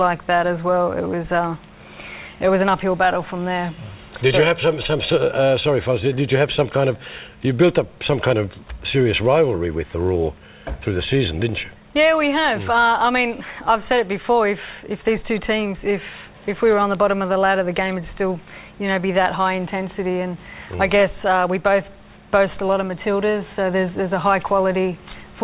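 No technical faults are audible.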